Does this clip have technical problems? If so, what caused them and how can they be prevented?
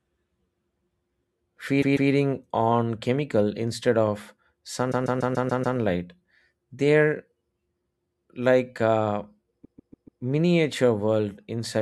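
Yes. This speech clip has repeated frames. The same 144 ms stretch replays twice at 1.81–2.10 s, six times at 4.91–5.77 s and four times at 9.64–10.21 s. It stutters and adds 0.29, 0.86 and 0.58 s. This points to a buffer of compressed frames being resent. Prevention: deduplicate frames by sequence number before decoding.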